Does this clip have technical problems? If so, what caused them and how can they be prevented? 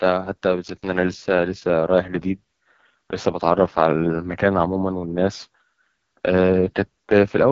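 Yes, the whole clip carries AMR wideband (HD Voice) codec damage, and it's heavy: rough, raspy speech, and nothing above about 7.5 kHz. That rasp fits the codec's lowest mode, around 6.6 kbit/s, where the pulse-driven model runs short of bits. Prevent it by keeping the link at 12.65 kbit/s or higher.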